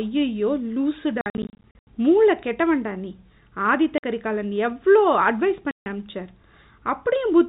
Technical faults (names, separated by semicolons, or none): packet loss filled with silence